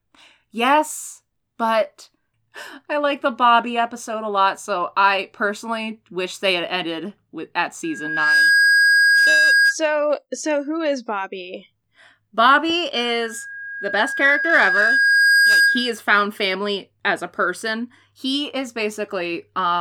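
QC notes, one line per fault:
7.84–9.77 s, loudspeaker feedback squeal: after "had ended with at" a 1.6 kHz tone swells over about half a second to roughly 5 dB above the speech, then stops before "so who is bobby". The microphone is picking up its own loudspeaker, and loop gain above unity at that frequency makes the tone feed on itself.
12.94–16.03 s, loudspeaker feedback squeal: the same 1.6 kHz loop rings again, building more slowly over about two seconds to a similar level, and clears just before "family as a person".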